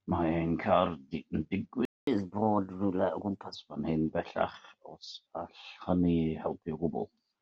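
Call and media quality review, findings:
Speech cuts to silence at 1.85 s for about 0.22 s, resuming at 2.07 s where it left off. Playback stall, likely the player's buffer running dry or its output thread being blocked, so nothing reached the device until it recovered.

From 2.07 s to 3.55 s speech runs fast and sounds raised, roughly two semitones sharp, then settles. Catch-up at higher speed: the player resamples its backlog at 1.15x to recover time lost in the stall.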